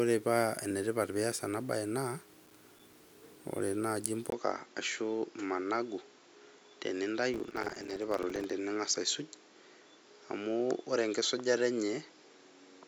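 From 2.47 to 2.93 s there is processor overload crackle: buffers of around 5 ms miss their deadlines, each leaving a hard-edged silent gap. A handful of gaps fuse into gritty tearing that stops abruptly once the load passes, unlike steady distortion.

At 4.30 s a 20 ms silence marks the input switched to a poorer device, likely a headset call profile. Nothing remains above 7.4 kHz, and a new noise floor sits about 35 dB down. That fresh tone and hiss, with no level jump, distinguish it from mere filtering.

From 7.34 to 8.50 s the crackle returns, denser, with dozens of missed buffers.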